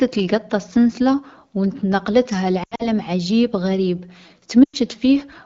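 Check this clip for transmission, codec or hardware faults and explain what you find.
Yes, there are two dropouts in this wideband speech, whose clean upper band fits AMR-WB at 12.65 kbit/s. From 2.64 to 2.89 s, between "السنسلة و نـ نقلتها" and "عجيب غريب", the sound smears, warbles and sags, then returns rough. About 120 ms is missing, scattered over 160 ms, with the longest gap about 80 ms. From 4.64 to 4.77 s, after "عجيب غريب", a roughly 100 ms gap stretches and fades in the same way. These are lost AMR speech frames. Corrupted frames failed their checksum, so the decoder repeated the last good pitch and vocal tract settings at falling gain.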